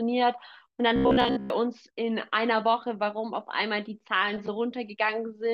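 From 0.96 to 1.50 s, audio likely arrived too seldom and short buffers looped, causing robotic sound from repeated short buffers, a metallic 67 Hz buzz.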